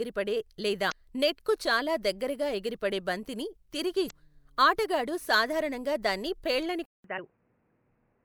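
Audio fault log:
0.88–0.92 s, 4.07–4.12 s, 7.15–7.19 s: damaged data in a compressed stream. Short glitches where the decoder choked on corrupt frames, lost sync and skipped ahead to the next header.
6.86 s to end: input switched to a poorer device, likely. After a 187 ms gap the sound goes dull and boxy with nothing above 3 kHz, about 5 dB quieter, and a new noise floor roughly 35 dB down.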